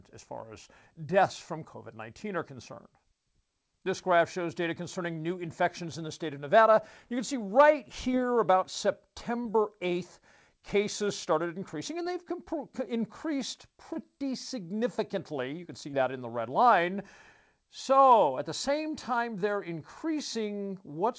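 Short concealed packet loss occurs at 8.12, 9.43, 12.03, 13.93 and 15.91 s. Each time, about 20 ms of the call arrived too late, so the receiver extended the preceding sound and crossfaded back, leaving a brief smear or wobble in the speech, which is band-limited to 8 kHz.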